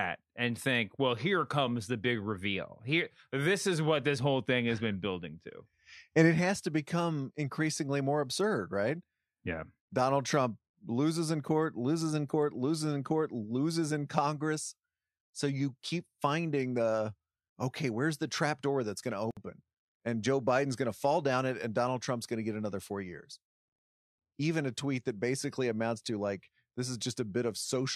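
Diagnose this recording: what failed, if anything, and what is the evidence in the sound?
The failure is at the codec stage: a gap at a join of encoded pieces. At 19.31 s the speech breaks off and a gap runs until 19.37 s, about 59 ms, with smeared edges, and the speech then resumes exactly where it left off. The pieces were encoded separately and spliced untrimmed, so encoder start delay and final-frame padding stayed in. Unlike a network dropout, nothing is missing; time has only been inserted.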